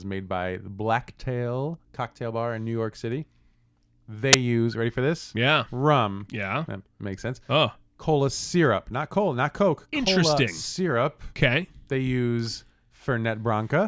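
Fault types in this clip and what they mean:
File tags played as audio: a hard-edged, very loud white-noise burst at 4.33 s, before "use ready for this", as compressed cover-picture data is read as samples.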